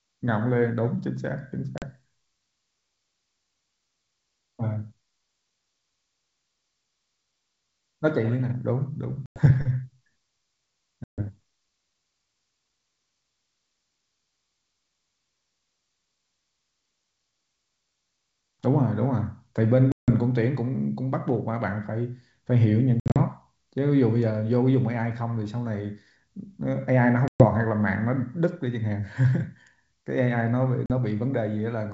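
Packet loss on an ADPCM call at 1.78, 9.26, 11.04, 19.92, 23.00, 27.28 and 30.86 s. Each time, lost packets are replaced by silence, cutting hard-edged holes of roughly 40 to 160 ms into the speech. The one at 23.00 s is broken into shorter gaps spread over about 160 ms. Because the decoder's adaptive predictor and step size no longer match the sender's, the speech comes back slightly distorted, at times with a click or at the wrong level, then settles within a few tens of milliseconds. Around these gaps, the G.722 wideband coding sounds clear up to 7 kHz.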